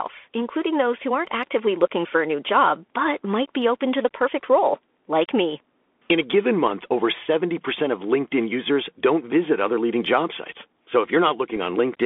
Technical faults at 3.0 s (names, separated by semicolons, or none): Bluetooth CVSD headset codec